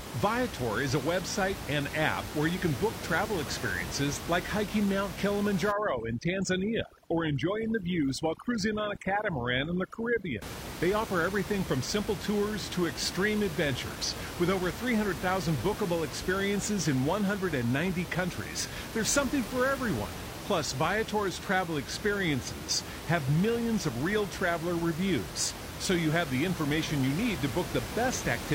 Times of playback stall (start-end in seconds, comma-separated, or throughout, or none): none